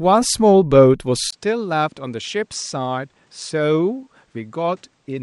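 At 1.31 s the speech breaks for a brief gap of about 20 ms, and from there to the end it sounds duller and slightly quieter, roughly 5 dB down, with new background noise sitting roughly 40 dB below the speech. The likely cause is an input switched to a poorer device mid-recording. A spectrogram shows the band above 9.8 kHz going empty after the gap, and the waveform shows a thin dropout, then a lower envelope and a raised floor.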